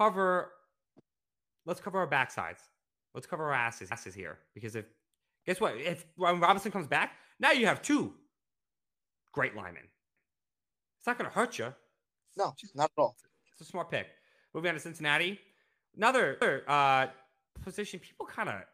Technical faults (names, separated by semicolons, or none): overlapping chunks